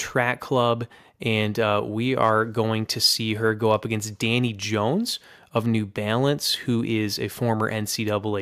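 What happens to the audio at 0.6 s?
Nothing goes wrong at 0.6 s; the speech runs through that moment intact, with no dropout, click or other disturbance.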